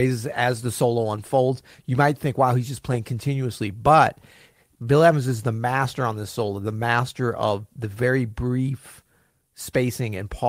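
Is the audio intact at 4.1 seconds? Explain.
Yes, at 4.1 seconds the speech runs through cleanly with no dropout, click, distortion or other fault at that moment.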